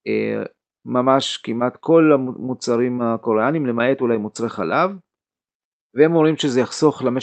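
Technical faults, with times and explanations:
No faults found; the speech came over a WebRTC call path through an Opus codec, and its top end stopping at about 8 kHz is that path's normal bandwidth limit.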